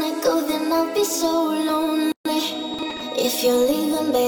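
From about 0.96 s to the end there's a thin, steady whistle at 3.8 kHz, sitting roughly 20 dB under the sound and swelling and fading slowly in level. That's likely a feedback whistle, with the loudspeaker-to-microphone loop hovering right at the edge of feedback without running away.

At 2.12 s the sound drops out for 135 ms, until 2.25 s, then picks up where it left off. It's a gap at a join of encoded pieces. Encoder start delay and last-frame padding were left in when the separately encoded chunks were spliced, and the codec smears the hard edges.

From 2.74 to 3.02 s there's a gritty burst of processor overload crackle. The processor kept missing its deadlines, and each missed buffer was skipped outright. The tiny hard-edged holes point to buffers of about 3 ms, with something like fifteen dropped over the stretch.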